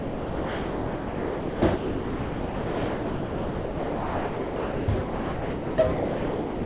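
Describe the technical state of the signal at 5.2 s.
Sound dropped by the voice detector covers 5.2 s, in a gap running from 5.02 to 5.78 s. For those 0.76 s the sound disappears and steady, featureless noise fills its place until the sound returns at 5.78 s. The likely cause is the sender's voice detector judging this passage to be background and halting transmission, with the receiver generating comfort noise instead. Around the gap, the sound reaches nothing above 4 kHz, consistent with a G.711 call path.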